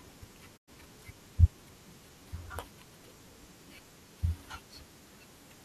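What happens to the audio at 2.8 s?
Nothing goes wrong at 2.8 s; the speech continues cleanly through that moment with no dropout, click or distortion.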